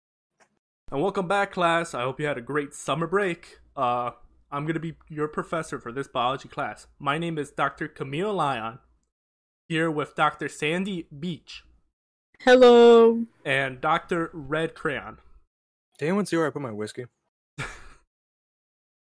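No technical faults can be heard anywhere in this speech recording. There is nothing in the audio that calls for a time or a description.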